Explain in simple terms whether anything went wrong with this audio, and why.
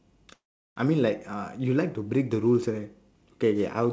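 Call audio freeze, 0.34 to 0.78 s: the sound stalls, the last sound stretching and fading into silence, likely from delayed packets, and resumes with nothing lost.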